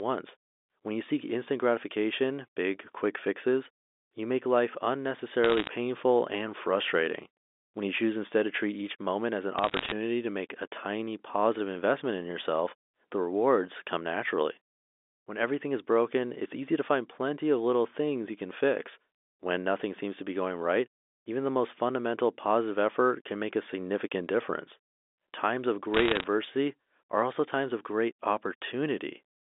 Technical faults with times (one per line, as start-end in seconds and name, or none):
5.44-5.67 bit errors on a digital phone line
9.59-9.92 bit errors on a digital phone line
25.94-26.24 bit errors on a digital phone line